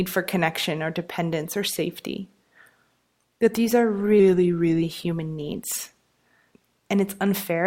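At 3.94 s the audio shifts abruptly into an adaptive stream at a lower bitrate, lasting until 5.98 s. Codec artefacts rise, which fits a switch from about 64 kbit/s Opus down to about 24 kbit/s. Unlike a dropout or buffering stall, there is no gap and no change in timing. Only the quality changes, and it jumps back cleanly at the end.

Inside that stretch, from 4.20 to 4.82 s, the speech slows by 6.4 % and drops in pitch by 115 cents, just over a semitone. This is likely a drift correction step, where clock-matching software retuned the playback rate in one move to manage its buffer. Speed and pitch moving together for a fixed stretch separates it from the steady tonal degradation of the bitrate drop around it.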